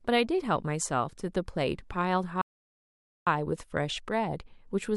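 Speech, with a playback stall from 2.41 to 3.27 s: the sound cuts off mid-flow for about 0.85 s, likely because the player ran short of data or its thread was blocked. The waveform drops to a flat line, and the spectrogram shows an empty vertical band across all frequencies.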